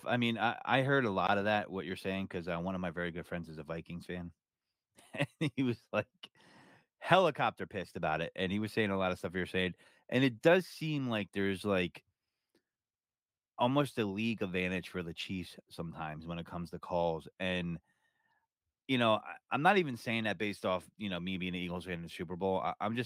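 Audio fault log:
No faults are heard in this speech recording. Nothing in it calls for an entry in the log.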